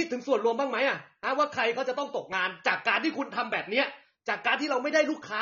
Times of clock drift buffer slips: none

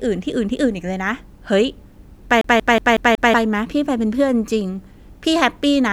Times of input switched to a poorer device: none

